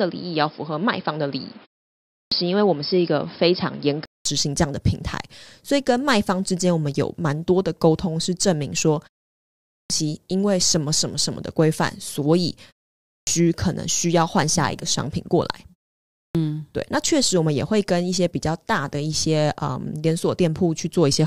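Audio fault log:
0.00–4.25 s: input switched to a poorer device. Nothing above 5.3 kHz, a 200 ms gap, and a new noise floor about 30 dB down at unchanged level; likely a device change, not filtering.
2.04, 9.61, 12.97, 16.06 s: clipped start after a pause. After silences of 0.33–0.61 s, roughly 280–300 ms of each onset is lost while the output wakes, unlike muted pauses, where only background vanishes.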